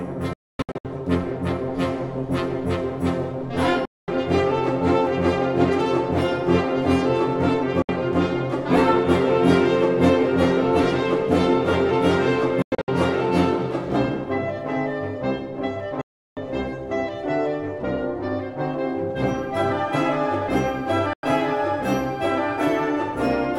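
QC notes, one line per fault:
0.33–0.85 s, digital broadcast dropout: the receiver lost valid frames and muted in several short holes, about 416 ms missing across roughly half a second, longest gap 256 ms.
3.85–4.08 s, digital broadcast dropout: reception failed and the decoder muted with a 3 ms fade, leaving a clean 224 ms silence where the programme is simply gone.
7.82–7.89 s, digital broadcast dropout: a brief loss of good frames muted the output, giving a sharp 64 ms hole before sound resumed mid-programme.
12.62–12.88 s, digital broadcast dropout: frames failed intermittently, so the mute flickered, about 192 ms lost in scattered gaps over 256 ms, the longest 96 ms.
16.01–16.37 s, digital broadcast dropout: the signal dropped out and the receiver muted with a 3 ms fade, leaving a 352 ms silence where the programme is lost.
21.13–21.24 s, digital broadcast dropout: corrupted frames triggered a quick mute, cutting a 96 ms hole with abrupt 3 ms edges before normal audio returned.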